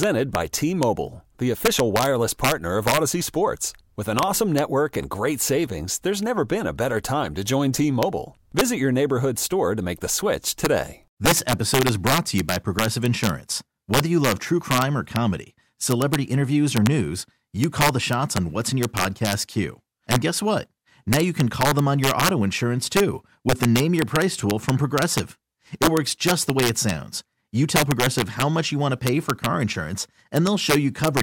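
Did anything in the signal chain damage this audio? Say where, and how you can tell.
Yes. Integer overflow in the sample-format conversion: the gain stage drove the speech about 6 dB past full scale without limiting, so a small fraction of peaks wrapped to the opposite sign. Throughout the clip, loud syllables carry violent cracks, far harsher than ordinary clipping.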